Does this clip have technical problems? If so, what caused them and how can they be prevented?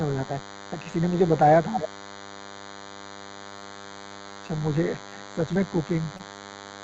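Yes. DECT cordless phone buzz runs through the whole clip: a nearby DECT handset or base bursts every 10 ms, and the audio circuitry rectifies this into a thin 100 Hz buzz, roughly 20 dB below the speech. Keeping DECT bases and handsets well away from the microphone and its cabling, or using shielded gear, prevents it.

Repeated packet loss (robotic sound) affects 3.49 to 4.60 s. Eleven short gaps, none longer than 20 ms, were each patched by extending the previous sound, concealing about a fifth of that span and leaving choppy speech with pieces missing. A steadier network connection, for example wired instead of congested Wi-Fi, prevents it.

Short concealed packet loss occurs at 5.10 to 5.14, 5.54 to 5.57, 6.17 to 6.21, 6.33 to 6.36, 6.36 to 6.39 and 6.78 to 6.81 s. Each time about 20 ms of audio arrived too late and was filled by continuing the last sound, which leaves a brief smear or wobble. 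Reducing packet loss on the link, or enabling forward error correction in the codec, prevents it.

Jitter buffer slow-down runs from 6.40 to 6.83 s. The buffer was running low or had just raised its target delay, so the receiver repeated pitch periods, adding 40 ms and playing speech at 93% speed with unchanged pitch. More stable packet timing, or a slightly larger fixed buffer target, prevents it.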